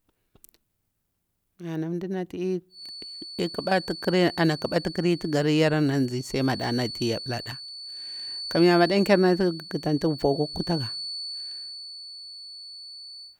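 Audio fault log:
2.68 s to 13.40 s, feedback whistle: a thin, steady tone near 4.5 kHz sits behind the speech, roughly 15 dB below it, swelling and fading slowly in level to the end of the clip. The likely cause is the loudspeaker-to-microphone loop hovering just at the feedback point, sustaining one frequency without running away. Unlike mains hum or a fixed electrical whine, its pitch is high and its level breathes rather than holding perfectly constant.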